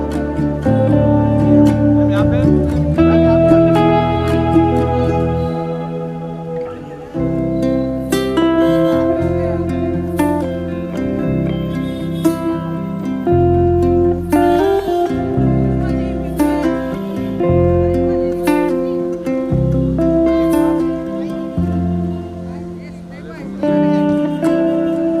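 No technical faults can be heard anywhere here.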